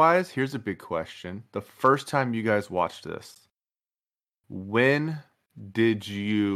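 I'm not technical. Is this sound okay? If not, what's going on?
No. At about 3.35 s the speech drops out for a split second, a tiny, sharp-edged hole of silence, roughly 13 ms long, like a very brief stutter. This is a gap between stream segments. The audio arrives in chunks about 4 s long, and the timing of two neighbouring chunks doesn't quite line up, so the player fills the space with silence. Nothing is cut out. The speech is just pushed slightly later.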